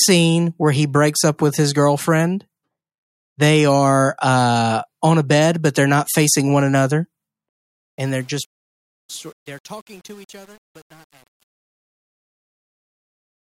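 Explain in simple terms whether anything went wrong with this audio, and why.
The speech fades out from about 7.49 s to the end, and the quiet tail has truncation distortion on a fade. From about 8.02 s the sound turns gritty, which fits a volume stage keeping only 8 bits without dither. Unlike steady hiss, this roughness worsens as the level falls.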